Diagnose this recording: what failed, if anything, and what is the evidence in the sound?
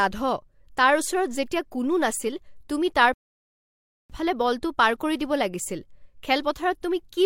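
A rebuffering stall at the playback stage: the speech halts into silence from 3.14 to 4.10 s, then resumes exactly where it stopped, adding about 0.96 s without losing anything, unlike a dropout.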